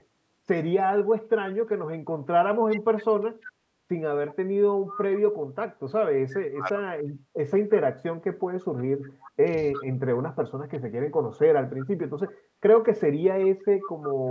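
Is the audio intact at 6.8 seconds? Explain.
No. From 6.57 to 6.85 s the speech drops sharply, by around 25 dB, likely speech suppressed in double talk, where an echo canceller mistook overlapping talk for echo. The waveform shows a brief envelope collapse, the spectrogram a faint, thinned band.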